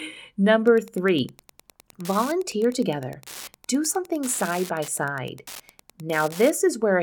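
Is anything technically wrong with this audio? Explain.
Yes. From 0.65 s to 6.5 s the speech carries Wi-Fi interference: a nearby radio's beacon, repeating every 102.4 ms, is rectified by the audio circuit into steady ticking about ten times a second, roughly 20 dB below the speech. A spectrogram shows evenly spaced vertical broadband lines, and the waveform shows a regular train of spikes.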